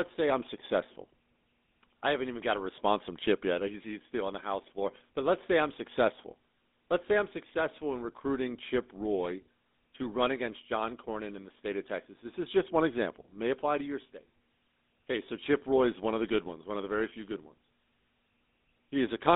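Buzzy, gravelly speech runs through all of it, squeezed into a narrow band from about 250 Hz to 3.6 kHz, the mark of the GSM full-rate codec. Its pulse-driven vocal-tract model, which fits a 13 kbps stream, plainly roughens the voice.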